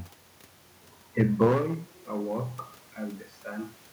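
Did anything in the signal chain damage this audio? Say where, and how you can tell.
Yes. Hard clipping at a converter or gain stage, 1.2 to 1.74 s: about 8 dB of overdrive cuts the peaks flat, adding harsh, high-frequency fuzz.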